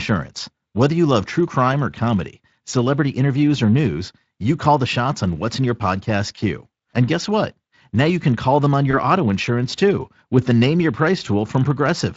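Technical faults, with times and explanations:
6.35–6.39 s and 8.91–8.95 s, VoIP packet loss concealed by the speech codec: one 20 ms packet dropped each time, after "what's in your podcast" and "can call them on". The Speex decoder extrapolated its last pitch and filter, so the speech briefly smears into a buzzy tone or coloured noise that fades.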